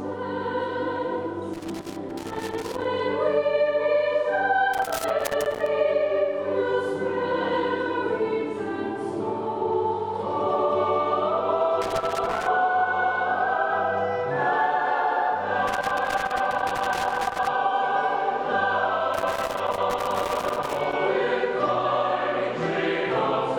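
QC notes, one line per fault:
1.54–2.85 s, 4.74–5.66 s, 11.82–12.47 s, 15.67–17.47 s, 19.14–20.93 s: loose connector crackle. Irregular scratchy bursts break up the sound as a worn or dirty contact rapidly makes and breaks, chopping the signal.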